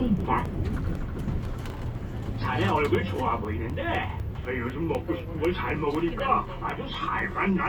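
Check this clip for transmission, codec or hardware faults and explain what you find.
One hardware fault here: periodic USB or driver dropouts from 0.20 s to 7.44 s. Every 0.25 s something stalls the driver, roughly a millisecond drops to silence, giving around thirty regular ticks.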